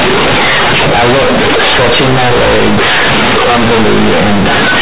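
From start to finish the speech is hit by companded audio read as linear. A-law telephone bytes are being played back as plain 8-bit samples without expansion, so every sign flip throws the waveform across about half its range. Quiet bits come out as loud as the peaks, and the whole thing turns into harsh, buzzy distortion, with heavy noise filling the pauses. Under that, the sound stops around 4 kHz, which fits 8 kHz telephone sampling.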